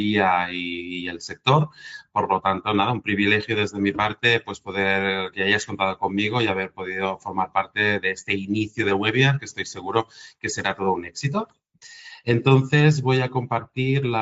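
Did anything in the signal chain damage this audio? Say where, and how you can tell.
No, nothing audible in the signal chain has damaged this audio, and the signal holds steady at every stage without any defect that can be heard.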